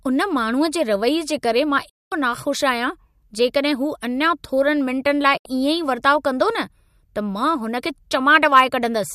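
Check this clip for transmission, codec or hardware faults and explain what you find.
Two digital broadcast dropouts in this speech, both the same kind of fault. The first runs from 1.89 to 2.12 s, a gap of about 0.22 s. The second is shorter, 5.37 to 5.46 s, roughly 0.07 s of missing audio. In each case the receiver stopped getting good frames, either from signal loss or failed checksums, and muted until clean data returned. The sound fades out over about 8 ms, sits silent, then picks up later, with whatever was broadcast in between simply gone.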